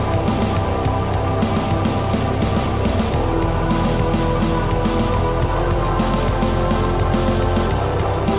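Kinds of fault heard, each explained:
Nothing to flag here, as no fault turns up anywhere in the clip, and the only thing you notice is the narrow phone-call band from the call path, with nothing above 4 kHz.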